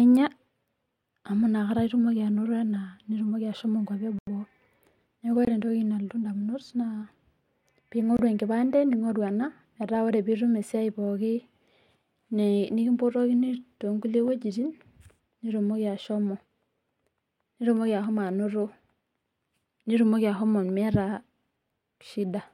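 Blocks of digital silence break the speech at 4.19–4.27 s after "ena nitumoki ashomo nkuapi" (about 87 ms), and at 5.45–5.47 s and 8.17–8.19 s before "enkipande ningorru" (23 ms each, fitting a 1024-sample buffer). Output buffers likely went unfilled. Each sounds like an abrupt dropout, a short hole with no fade, and shows as a near-flat line on the waveform with vertical spectrogram streaks at both edges.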